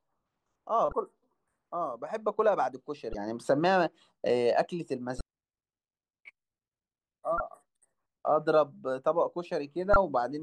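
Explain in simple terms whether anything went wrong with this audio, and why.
Something did go wrong. Five short glitches come from damaged data in a compressed stream. They sit at 0.89, 3.11, 5.18, 7.37 and 9.93 seconds, each lasting about 0.03 seconds. At those spots part of the stored speech data is broken. The player can't read that piece, loses its place, and hunts for the next readable chunk. You hear a quick chirp or blip as the speech breaks up for an instant.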